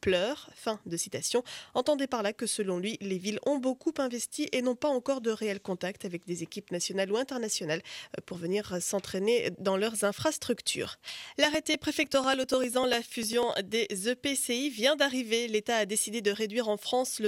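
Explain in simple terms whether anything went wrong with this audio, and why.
Something did go wrong, between about 10.55 and 13.53 s. There's a run of periodic USB or driver dropouts: roughly every 0.099 s, something in the background briefly stalled the audio connection, and around a millisecond of sound just got skipped. That happens about thirty times, so you hear a steady ticking, roughly ten clicks a second, laid over the sound. It's the even spacing that gives it away as a system hiccup.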